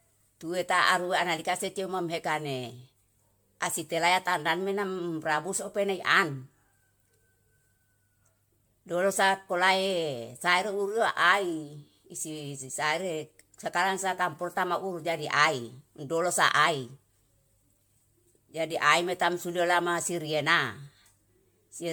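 Throughout the speech, a swirly, hollow smear clouds the sound and consonant attacks blur, beyond what one 128 kbit/s MP3 encode would give. Generation loss is the likely cause: roughly ten successive MP3 passes, each requantising on a shifted frame grid, stacking noise and spectral holes.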